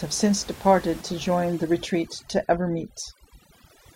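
From 1.01 s, right after "since departed", to the end, the background drops and breaks up into twinkling specks. This is overdone noise removal: a suppressor set too hard, cutting individual frequency bands near its noise estimate and taking quiet speech detail with them. The room noise, about 21 dB below the speech, is what the tool is attacking.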